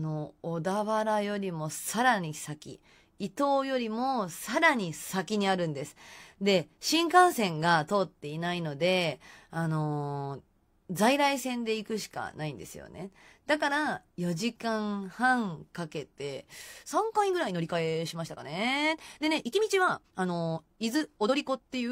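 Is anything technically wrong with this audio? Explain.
Yes. From 16.72 s to the end at 21.92 s there's a time-stretched section: the speech suddenly runs about 1.53 times faster with the pitch unchanged. That's likely software squeezing the audio by dropping short slices, which leaves it rushed.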